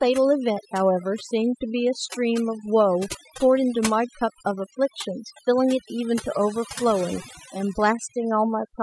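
Speech runs throughout with overdone noise removal: a noise reduction stage set far too strong has pulled individual frequency bands down or out wherever they sat near its noise estimate, taking quieter parts of the voice with them. The result is a background that drops to near-silent gaps sprinkled with twinkling specks. On a spectrogram this shows as a black background dotted with isolated short bright islands and ragged, hollowed-out gaps in the speech harmonics.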